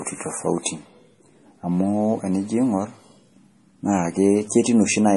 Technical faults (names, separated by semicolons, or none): MP3 compression